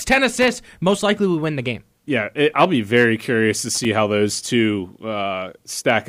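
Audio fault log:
0.42–0.55 s and 3.75–3.85 s, loose connector crackle: two short, irregular bursts of scratchy crackle, each about a tenth of a second long. The first comes just before "most likely we win", and the second falls between "be very curious to" and "how those two". A worn contact is making and breaking rapidly, chopping the signal. Unlike steady surface crackle or a single digital click, it arrives as a ragged cluster that starts and stops abruptly.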